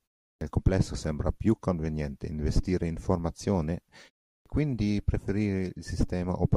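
Clipped start after a pause at 0.34 s and 4.39 s in this speech clip: the output device goes idle in silence and takes time to wake, swallowing about 72 ms before "complesso sembra più conveniente" and about 66 ms after the pause following "conveniente investire in formazione", so speech begins abruptly.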